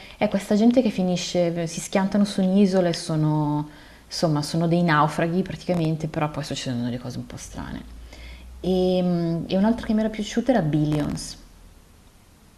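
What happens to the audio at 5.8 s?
The processor falls behind between 5.63 and 5.85 s and misses a run of buffer deadlines. The gaps are tiny, which points to buffers of under a millisecond, and each missed buffer is filled with silence. This is processor overload crackle: several hard-edged dropouts land close together and tear through the speech as a short, gritty crackle. It stops once the load eases, just after 5.8 s.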